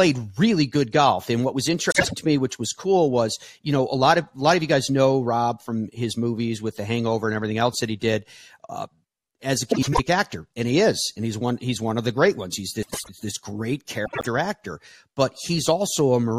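Frames out of order garble this speech clip at 1.90–2.14 s, 9.71–10.00 s (after "as a", before "actor and he is"), 12.83–13.09 s (before "this great") and 14.05–14.27 s (between "this great" and "actor but"). In each stretch two adjacent blocks of about 78 or 105 ms swap places, producing a fluttering jumble but no lost time, which fits runs of three or four frames decoded in the wrong sequence.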